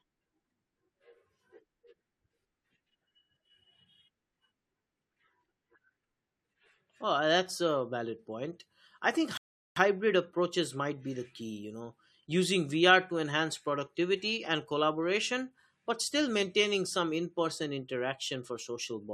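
At 9.37 s, just after "valid point I think", the speech drops to silence. It returns at 9.76 s with "approaches might be the". This is a rebuffering stall. The player used up its downloaded audio and had to wait for more data. Playback then picked up at the exact point where it stopped. No speech is missing. The gap simply adds about 0.39 s of dead air to the clip.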